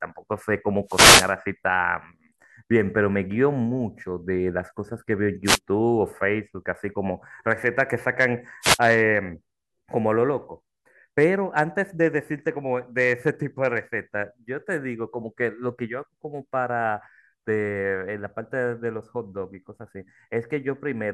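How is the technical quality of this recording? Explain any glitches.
The speech is interrupted three times by wireless microphone noise hits: from 0.86 to 1.34 s, 5.45 to 5.59 s, and 8.61 to 8.79 s. Each time, reflections briefly cancel the FM radio signal, the receiver's noise floor surges up, and a short swish of static washes over the voice. Unlike a digital dropout, which cuts to silence or stutters, these bursts fill the gap with hiss rather than losing the audio.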